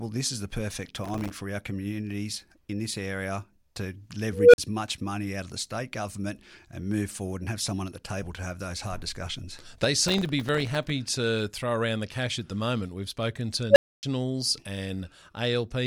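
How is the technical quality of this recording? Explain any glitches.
The recording has two kinds of glitch, each occurring twice.

From 0.86 to 1.35 s and again from 10.08 to 10.90 s, a gritty, tearing crackle rides over the sound. This is processor overload crackle. The processor kept missing its deadlines for very short buffers, around a millisecond and a half each, dozens in a row. Each missed buffer became a sliver of silence with hard edges, and the run of tiny dropouts adds up to that harsh burst.

From 4.33 to 4.58 s and from 13.70 to 14.03 s, a tone of around 500 Hz swells to a loud squeal and then cuts out. This is an unstable filter. A recursive filter with bad coefficients fed its output back until it grew without limit, clipped and overflowed. The first tone builds over 210 ms and is followed by 45 ms of silence. The second builds in just 59 ms and leaves 270 ms of silence before the filter resets.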